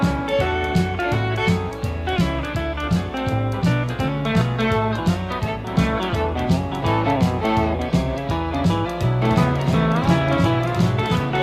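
At 9.22 s a doubled audio track kicks in abruptly and runs right to the end: a second full-band copy of the sound sits roughly two seconds behind the original, about 5 dB quieter. It's a dry, clean repeat with no decay or room colour, so it reads as the same material layered on itself rather than an echo. Likely cause is the audio being picked up a second time through a slower path.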